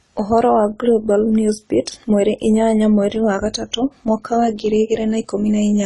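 The whole clip carries AAC compression damage, plainly audible from start to finish. Nothing in the speech reaches above 11.5 kHz. The top of the spectrum is simply gone, so the voice sounds dull. The likely cause is low-bitrate AAC-LC coding, with the damage pointing to roughly 32 kbps. At that rate the encoder quantises coarsely against its hearing model and lowers its cut-off. Consonants lose their edge and smear, and sibilants take on a fizzy texture.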